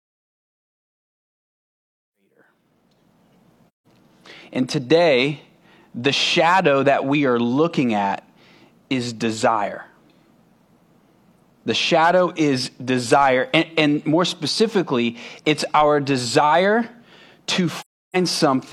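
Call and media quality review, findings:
AAC frame loss with muting, 3.72–3.86 s: soft-edged hole in the speech just after the fade-in ends (fade-in runs from about 2 s to 3.6 s). Decoder zeroed the lost spectra; overlapping windows taper the gap, fitting about four frames.

AAC frame loss with muting, 17.80–18.16 s: longer silent gap near the end, fitting about eight frames. Unlike the fade-in, the level returns within a frame rather than over a second or more.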